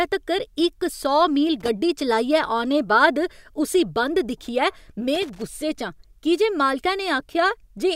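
Loose connector crackle breaks into the speech twice: from 1.60 to 1.68 s, right after "तक्कर इक सौ मील", and again from 5.15 to 5.42 s, after "बाद उस्सी बंद दिक्खियै". A worn or dirty contact is making and breaking, chopping the signal into a rough, scratchy burst. Unlike digital clicks or dropouts, which are clean gaps or ticks, this crackle is irregular and gritty, and the second burst runs far longer.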